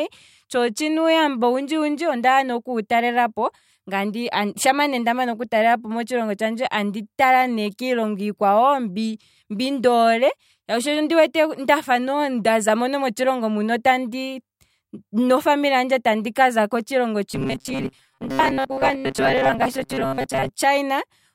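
From 17.31 to 20.49 s, just after "handje andika za kotshilongo", the speech turns into a rigid, metallic buzz locked at 134 Hz. This is robotic sound from repeated short buffers, likely caused by roughly 7.5 ms chunks repeating to cover most of the missing audio.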